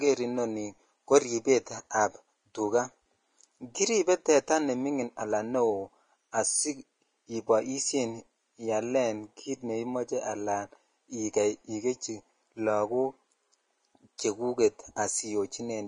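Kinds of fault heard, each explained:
Vorbis compression: The speech has a plainly audible grainy, hissy roughness that runs through the whole clip. Nothing comes through above about 10.5 kHz, so the top end is dull and closed off, while the treble that remains sounds coarse and noisy rather than detailed. This is likely low-quality Vorbis encoding, which fits a bitrate around 30 kbps. At that rate, fine high-frequency detail is quantised so heavily that it turns into noise of similar energy.
Pre-echo: At 14.18 s a short burst of hiss arrives just ahead of a sharp onset, and the attack itself sounds softened and smeared. The codec spreads its quantisation noise evenly across each transform block. Here the loud attack falls late in its block, so noise sized for the attack also fills the quiet moment just before it, about 10 ms ahead of the actual onset.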